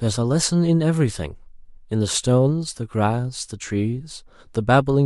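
A speech recording with nothing technically wrong with it.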